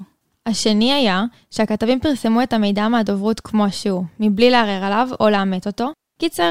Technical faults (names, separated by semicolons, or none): none